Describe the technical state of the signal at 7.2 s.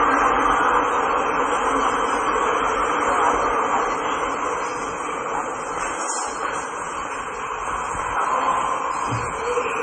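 At 7.2 s the sound is dull, with nothing above 10 kHz, and two different kinds of artefact layered together. This persists through the whole clip rather than appearing only at that moment. The likely cause is transcoding between lossy codecs: a very low-bitrate MP3-style encode, around 24 kbit/s, re-encoded as HE-AAC, whose bits go partly to reproducing the earlier damage while it adds its own.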